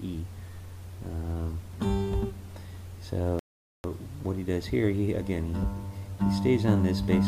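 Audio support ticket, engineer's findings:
Rebuffering stall, 3.39 to 3.84 s: playback drops to silence, then picks up exactly where it left off. Player buffer ran dry, so nothing's lost, just about 0.45 s added.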